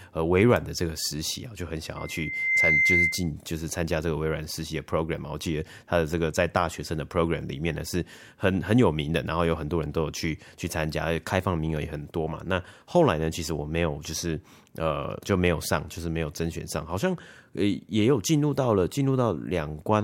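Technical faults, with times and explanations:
1.96 to 3.31 s, loudspeaker feedback squeal: a pure, piercing tone near 2.1 kHz rises out of the speech, swelling over most of a second until it sits a few decibels above the voice, then cuts off. The microphone was picking up the loudspeaker it was feeding, and at that one frequency the round trip through the loop came back louder than it went out, so the tone kept reinforcing itself.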